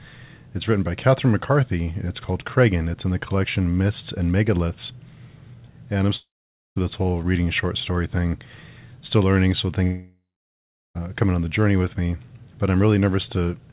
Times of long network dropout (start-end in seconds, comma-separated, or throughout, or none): 6.16-6.78, 9.84-10.97